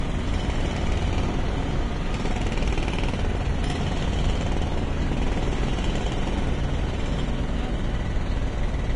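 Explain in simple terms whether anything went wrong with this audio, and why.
From start to finish the top end stops at about 10.5 kHz, and what's left sounds hissy and grainy, with rough tones and smeared attacks. That points to heavy Vorbis compression as the likely cause. A simple treble filter would sound dull but clean, without this gritty texture.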